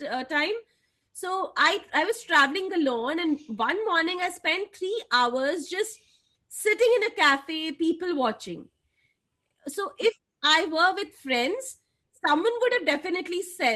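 Nothing stood out on listening to this speech recording; no technical faults could be heard at any point.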